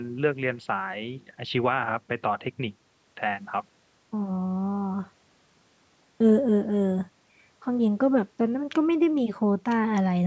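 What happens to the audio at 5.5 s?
Nothing goes wrong at 5.5 s: the speech there passes through cleanly, with only the ordinary call microphone processing shaping it and no fault to be heard at that moment.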